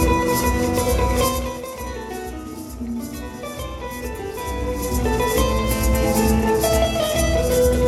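No technical faults can be heard in the clip.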